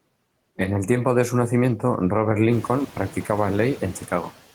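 Throughout the speech the background sinks in the pauses and swells back under each phrase, a pumping that grows more obvious once the room noise rises by about 12 dB at roughly two and a half seconds. These are noise suppressor artifacts: frame by frame, bands judged to be steady noise are pulled down by about 16 dB, then released when speech fills them.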